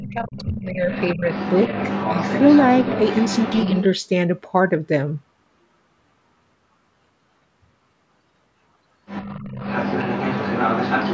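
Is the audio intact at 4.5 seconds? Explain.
Yes, the speech at 4.5 seconds is intact, carrying only the expected band limit of call microphone processing, with its lowest bass trimmed and nothing above 8 kHz.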